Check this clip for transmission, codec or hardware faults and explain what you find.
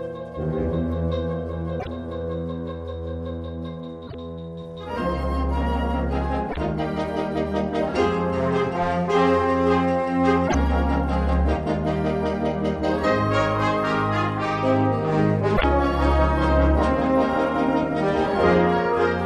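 The clip has one recurring fault: damaged data in a compressed stream, heard five times at 1.77–1.88 s, 4.04–4.15 s, 6.47–6.57 s, 10.44–10.55 s and 15.53–15.64 s. Each time, corrupted bytes reach the decoder, which misreads those frames, loses sync and hunts for the next valid frame header. For about 0.11 s the audio is replaced by a chirp, squawk, click or short hole before normal decoding resumes.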